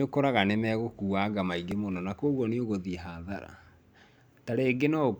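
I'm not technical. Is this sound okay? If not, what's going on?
No. At 1.71 s, just before "mũno na kwoguo", there's a tiny click or buzz. That's a repeated buffer: late audio made the device replay a very short snippet twice more.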